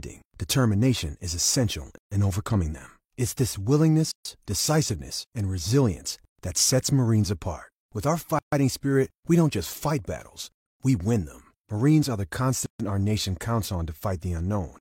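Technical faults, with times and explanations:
1.98, 4.12, 6.25, 8.39, 10.52 and 12.66 s, gap at a join of encoded pieces: the speech stops dead for about 136 to 138 ms every 2.0 s, then resumes where it left off. Each 2-second piece was encoded separately and joined untrimmed, so encoder start delay and final-frame padding remain as silence with smeared edges.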